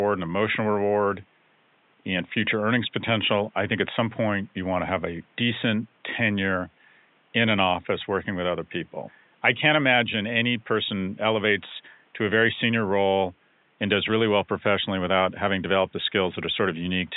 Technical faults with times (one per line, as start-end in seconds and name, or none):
none